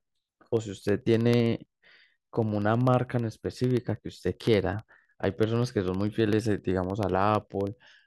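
Speech, broken by periodic USB or driver dropouts from 0.06 s to 7.99 s. Every 0.064 s, a tiny slice of audio, a fraction of a millisecond, drops to silence. Well over a hundred ticks result, evenly spaced and audible against the voice. A background task stalling the bus causes this.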